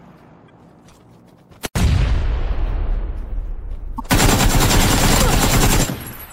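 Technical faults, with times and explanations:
0.46–0.50 s and 3.96–4.00 s, damaged data in a compressed stream: two short bursts of about 44 ms each, heard as a chirp, squawk, click or short hole. Corrupted bytes in the encoded stream make the decoder misread the affected frames, lose sync, and hunt for the next valid frame header, emitting garbled output meanwhile. On a spectrogram each shows as a narrow vertical break in the surrounding pattern. The waveform shows an abrupt, irregular patch breaking the surrounding shape.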